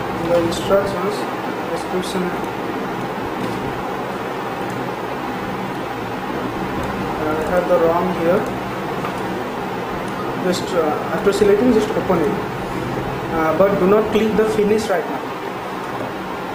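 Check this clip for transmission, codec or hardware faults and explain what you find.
The clip has compressed frames skipped at three points: 0.87 s, 5.11 s and 10.19 s. The decoder drops whole frames, roughly one at the first point and two at the others, so the audio jumps ahead, consistent with 10 ms frames.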